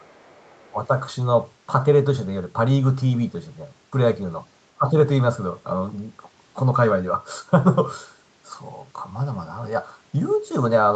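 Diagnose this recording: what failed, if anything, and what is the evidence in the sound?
Speech suppressed in double talk, from 0.0 to 0.77 s and again from 4.75 to 4.94 s: the speech level sinks by around 20 dB, with nearly the whole first stretch affected. This points to the call-processing echo canceller, which likely mistook overlapping talk for echo and attenuated everything.

Other side's voice leaking through, between 0.59 and 0.7 s: a faint second voice, roughly 35 dB below the speech, sits underneath the dip. Its likely cause is residual loudspeaker echo that the same call-processing stage failed to subtract from the microphone signal.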